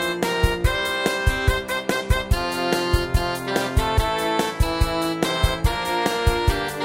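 No technical faults are audible.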